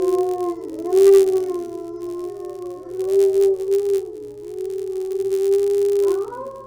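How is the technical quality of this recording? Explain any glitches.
The technical quality is compromised by one persistent fault running through the whole recording.

Filter restarted on every block, from start to finish: a filter in the chain discards its internal state at each block boundary and begins again from silence, so every block opens with a small transient. These repeat at about 86.1 Hz, which fits a 512-sample buffer, and are heard as a steady buzz that rises and falls with the level of the sound.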